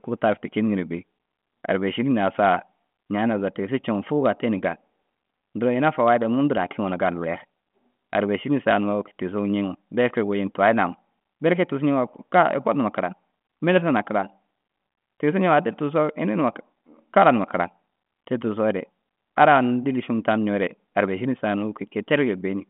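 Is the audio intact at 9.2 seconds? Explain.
Yes, the audio is intact at 9.2 seconds, with no fault at that moment.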